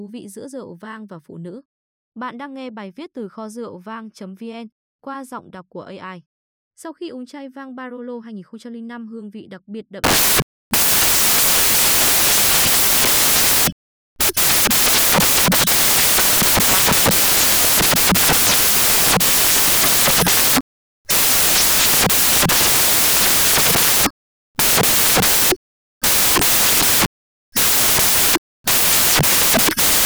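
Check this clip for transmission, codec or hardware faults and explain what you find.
There's one fault, and it's a big one. From about 10.04 s right through to the end, the speech turns into samples built from the wrong bytes. The reader is assembling each sample out of misaligned or swapped bytes, so the jittery low-order bits end up as the loudest part of every value. What you hear is a wall of loud, harsh noise, close to white on the louder speech.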